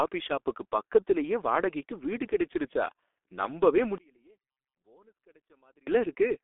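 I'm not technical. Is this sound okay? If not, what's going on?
No. The speech went through the G.723.1 codec, an old internet-phone format that squeezes audio very hard and discards everything above about 3.8 kHz. So the voice sounds muffled, rough and hoarse from start to finish, with smeared consonants.

From 3.98 to 5.87 s, right after "வாடகைக்கு வீடு கிடைச்சிருச்சா நம்பவே", the voice nearly disappears, dropping to a faint trace before returning. That is likely one channel inverted: one side of the stereo signal was flipped, so the two sides cancel each other when combined.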